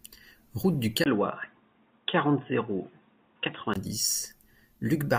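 A speech recording with one fault. At 1.04 s there is a brief gap of about 20 ms. Then the sound turns dull and boxy, with nothing above 3.8 kHz, until it clears again at 3.76 s. The loudness stays about the same. A faint new background noise sits far below the speech. The likely cause is an input switched to a poorer device partway through, such as another microphone or a headset's call profile.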